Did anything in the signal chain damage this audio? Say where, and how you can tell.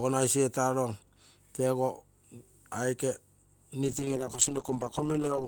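Yes. A call bitrate drop hits the codec from 3.85 s to the end. The encoder falls from 48 to 9 kbps. Speech turns coarse and muffled as bandwidth narrows from 20 kHz to 8 kHz.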